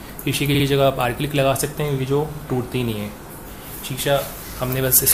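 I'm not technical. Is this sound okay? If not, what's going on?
No. At 0.54 to 0.64 s there is a brief stutter, a tiny blip of sound heard again twice. This is repeated frames: a small chunk of the recording, about 52 ms long, was stored or sent more than once, so the player repeats it, adding about a tenth of a second.

From 4.73 to 5.12 s, near the very end, loud moments turn harsh and fuzzy. This is hard clipping: the sound was pushed louder than the equipment could handle, so the tops of the waveform were chopped flat, creating that gritty distortion.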